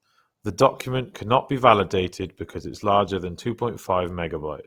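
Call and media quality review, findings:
Opus compression, throughout (0 to 4.7 s). Speech plainly rough and grainy, with a noisy texture on voiced tones; no obvious spectral holes or swirl; full bandwidth kept. Likely Opus music (CELT) mode starved of bits, consistent with about 24 kbps: bands keep their energy but are filled by folding or noise.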